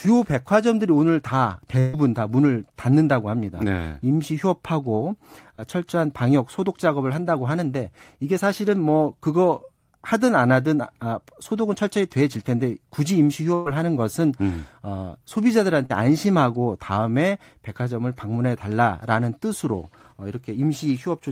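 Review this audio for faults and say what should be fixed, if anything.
Burst of packet loss at 1.79–1.96 s and 13.54–13.68 s: about 140 ms and 120 ms of speech dropped, bridged by a fading continuation of the preceding sound.

Short concealed packet loss at 5.56–5.60 s and 15.86–15.92 s: 20 ms and 40 ms gaps filled by extrapolating the last sound, heard as brief smears.

Enabling forward error correction and a deeper jitter buffer, with a more stable network path, would prevent both faults.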